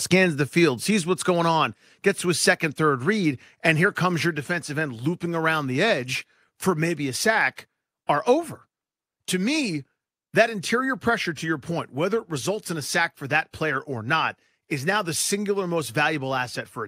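At 2.04 s, right after "sees what's going on", the whole speech level, voice and room together, drops by about 1 dB in one step before "to his second third". At 4.26 s it happens again, about 2 dB this time, between "read and here comes" and "defensive end looping around". That's a microphone volume stepped down, likely the call software trimming the input gain because it judged the mic too hot.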